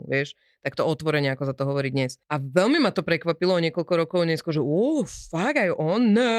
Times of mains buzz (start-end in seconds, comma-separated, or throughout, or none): none